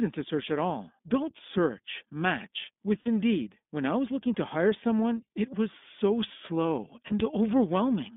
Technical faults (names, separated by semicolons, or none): iLBC codec; lost iLBC frames